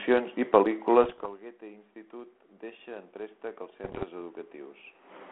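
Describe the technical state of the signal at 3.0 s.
At 3.0 s the automatic gain control is mid-rise, lifting gain by about 8 dB between 1.59 and 4.83 s after the input fell, so speech and room noise swell together.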